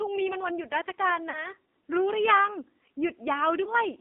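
Throughout, the speech sounds buzzy, synthetic and boxed into roughly 250 Hz to 3.5 kHz. This is heavy AMR narrowband mobile codec damage, pointing to a low rate near 5.9 kbps. From 1.30 to 1.48 s, and again from 3.64 to 3.75 s, the sound smears, warbles and sags before recovering roughly. These are lost AMR speech frames. The decoder stretched the last good frame with fading gain over gaps fitting about 40 ms and 20 ms of missing audio.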